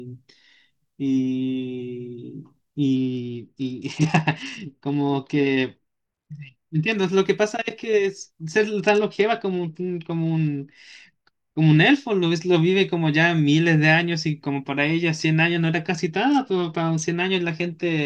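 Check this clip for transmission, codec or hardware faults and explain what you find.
The speech in this clip shows three Bluetooth SBC bit pool drops, at 2.96–6.95 s, 8.79–11.77 s and 16.15–17.04 s. In each span the treble goes dull and a gritty quantisation noise rises, then clears when the rate recovers. On a congested link the encoder spent fewer bits per frame, starving the upper sub-bands and quantising the rest coarsely. The degree of loss fits a fall from bit pool 31 to about 10, roughly 77 kbps.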